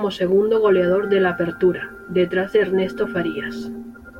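No technical faults are audible.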